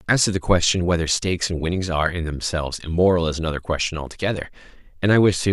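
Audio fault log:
Nothing to flag here, as this little speech clip doesn't give the ear anything to catch on.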